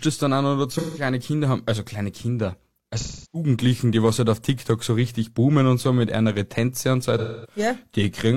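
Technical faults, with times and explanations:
0.72–1.01 s, 2.97–3.49 s and 7.18–7.58 s, AAC frame loss with concealment: three dropouts of about 0.17, 0.34 and 0.26 s, after "es dann an oder", before "die was halt auf" and after "und so". With frames missing, the decoder rebuilds each gap from the last good spectrum, so the speech turns smeared and noisy rather than going silent.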